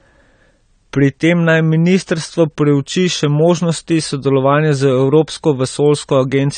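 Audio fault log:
Throughout, AAC compression: the speech has nothing above 9 kHz and the codec damage is plainly audible, with a dull, smeared top and a warbling, fizzy grain on sibilants and held sounds. This is likely a low-bitrate AAC-LC encode, around 32 kbps, where the coder narrows its bandwidth and quantises the remaining bands coarsely. A simple low-pass filter would also dull the sound but would leave what remains clean, without the swirling texture.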